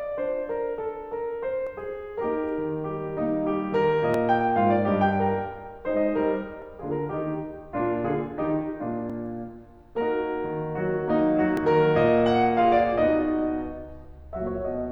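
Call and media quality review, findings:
Audio missing between chunks in the music. Short skips at 1.67, 4.14, 6.62, 9.10 and 11.57 s. Spacing is steady, about 2.5 s. Each gap is brief, around 20 ms. The music jumps forward with no silence, so the skips land as small hitches in the flow. Likely cause: a recorder or processor working in 2.5 s blocks, dropping a sliver at each block changeover and butting the two sides together.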